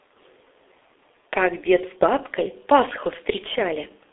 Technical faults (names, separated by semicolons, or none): G.723.1 codec